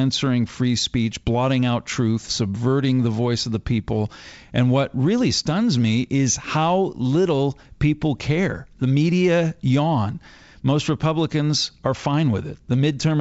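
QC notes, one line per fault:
Nothing to flag on this speech clip; it comes across the G.722 wideband telephone link at 64 kbit/s with at most a faint touch of the codec's usual upper-band hiss.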